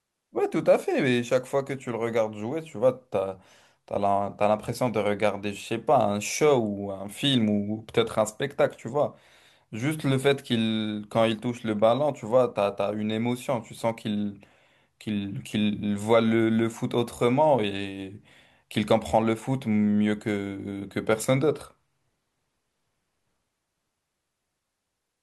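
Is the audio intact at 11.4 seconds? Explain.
Yes, the audio is intact at 11.4 seconds, with no audible fault at that moment.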